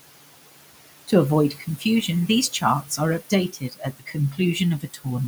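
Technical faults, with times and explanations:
Throughout, noise suppressor artifacts: the room noise, sitting about 16 dB below the speech, is pushed down by about 17 dB between phrases and swells back underneath them. On a spectrogram the noise floor pumps frame by frame.
1.5–1.85 s, 3.53–4.16 s and 4.8–5.06 s, speech cut by the noise suppressor: the suppressor mistakes quiet speech for noise and turns it down by up to about 12, 15 and 12 dB. Roughly a fifth, a third and a tenth of a second sound swallowed. The waveform envelope dips sharply, and the spectrogram shows faded speech energy.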